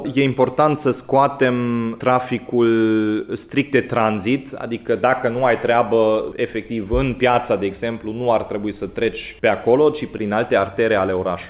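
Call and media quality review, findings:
No faults found in this clip. The call path is audible as a narrowband band limit with nothing above 4 kHz, which fits a G.711 mu-law codec at 64 kbps.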